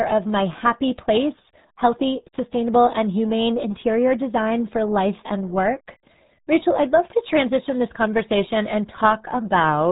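From start to finish the speech sounds muffled and gargly, with a wet, bubbling roughness over every syllable and nothing heard above about 3.8 kHz, so sibilants and consonant edges are dulled. This is the sound of the RealAudio 14.4 codec, the old RealAudio 1 speech coder built for dial-up modems. Its heavy damage fits a squeeze to roughly 8 kbit/s. At that rate the coder drops the upper band and can only crudely model what remains.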